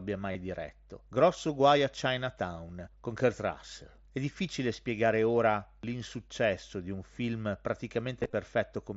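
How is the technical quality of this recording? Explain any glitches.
The recording has three short glitches on top of wideband headset audio, which stops at 8 kHz and has a light grain on loud passages.

Concealed Bluetooth headset packet loss occurs at 0.32 to 0.35 s, where about 30 ms of audio never arrived, and again from 8.19 to 8.33 s, where 67.5 ms went missing in pieces spread over 135 ms, the longest run being 22.5 ms. The receiver filled each hole by repeating the best-matching slice of recent waveform, so the gaps come out as a brief buzzy, held tone at full level with a small warble as real audio resumes. On a waveform the fill looks like a short, suspiciously periodic repeat. A spectrogram shows evenly spaced horizontal harmonic lines where the natural formant movement briefly freezes.

Audio missing between chunks appears at 5.83 s, just after "difficile spiegare ora". A piece of roughly 40 ms vanishes and the two sides are butted together with no silence, so the sound jumps forward. 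The likely cause is a recorder or processor working in blocks of about 3 s and dropping a sliver while switching from one block to the next. A waveform shows an abrupt discontinuity at the join, and a spectrogram shows a thin vertical broadband line there.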